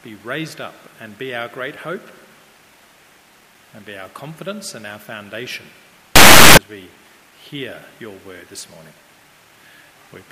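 A burst of very loud, harsh distortion runs from 6.16 to 6.57 s, with quiet stretches inside it blaring as loudly as everything else. The likely cause is signed and unsigned mixed up: the 8-bit samples were read with the top bit flipped, so each zero crossing jumps across the full range. On a waveform the span becomes a solid block far louder than its surroundings; a spectrogram shows a bright broadband smear.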